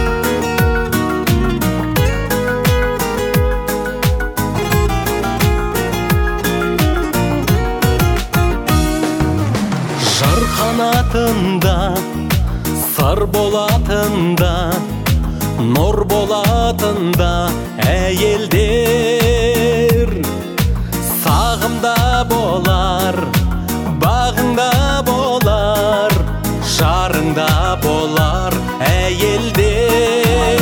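No technical faults are audible.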